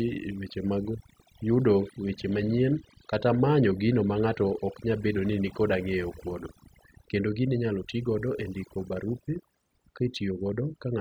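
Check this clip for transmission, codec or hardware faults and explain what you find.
Two faults run through the whole speech clip.

Overdone noise removal, throughout: the background drops to near silence scattered with twinkling specks. A noise reduction stage set far too hard is switching individual frequency bands down whenever they sit near its noise estimate, taking quiet parts of the voice with them.

Sample clock jitter, throughout: a faint hiss or roughness rides on the louder and brighter moments of speech and disappears in the pauses. The converter's clock is wandering by something under a microsecond, so samples land slightly off time; steep, fast-moving waveforms suffer most, leaving an error roughly 55 dB below the signal.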